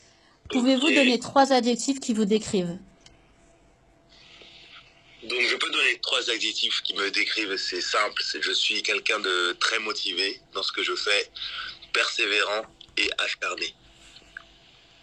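From 0 to 6.0 s, nothing sounds above 12.3 kHz and codec artefacts are stronger, then clarity jumps without a gap: an adaptive stream starting at a low bitrate, then stepping up.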